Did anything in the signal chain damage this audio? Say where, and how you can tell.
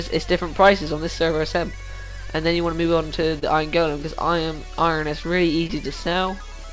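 Yes. At the network and jitter-buffer stage, a short stall from a late packet shows up between 3.39 and 3.44 s. The sound is held about 28 ms too long, with a slight buzz or dip, and then resumes exactly where it left off. Nothing is skipped, but everything after it sits 28 ms later. That added delay is what separates a late packet, where the buffer ran dry and waited, from a lost one.

A short concealed packet loss follows at 5.67 to 5.71 s, again at the network stage, heard through the G.722 call path whose content stops at 8 kHz. Here 20 ms of audio never arrived. The decoder papered over the gap by extending the preceding sound and crossfading back, producing a brief smear. Unlike the stall, the timeline does not shift afterwards, because the real audio was replaced rather than delayed.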